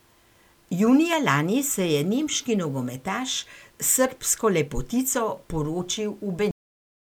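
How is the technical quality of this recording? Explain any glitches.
The quality is held back by a few digital glitches: three tiny clicks and an abrupt ending.

There are dropped samples at 1.13 s, just before "lani se je nemški", at 2.87 s, right after "lani se je nemški", and at 5.97 s. Each is a single sharp click, likely from a fraction of a millisecond of audio going missing, so the waveform jumps straight to a later value.

There's also a cut-off end at 6.51 s. The speech stops mid-sound and drops to dead digital silence with no natural decay, because the final stretch of audio was never written or played out.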